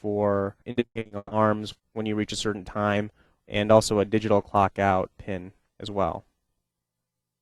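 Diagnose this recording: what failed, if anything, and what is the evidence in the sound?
The failure is at the network stage: repeated packet loss (robotic sound) between 0.71 and 1.33 s. Over that stretch the audio turns choppy as a quick run of short holes is patched by stretching the preceding sound forward, the longest hole about 140 ms. Roughly 380 ms is concealed, about 61% of the span. Each patch barely ends before the next loss begins, so the output stutters with real content missing.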